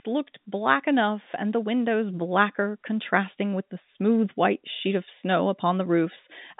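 Nothing stood out on listening to this speech, which carries the narrow band of a G.711 A-law telephone line running at 64 kbps.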